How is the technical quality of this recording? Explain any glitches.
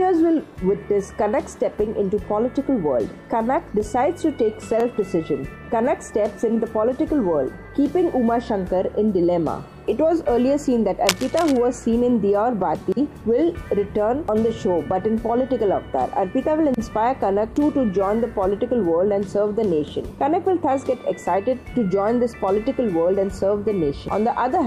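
One glitch stands out. From 11.06 to 11.57 s there is cable scratch noise: a dense, uneven burst of scratching almost as loud as the sound itself. It is likely caused by a worn cable or connector shifting. Its changing contact resistance sprays irregular noise, unlike the isolated sharp ticks of digital clicks.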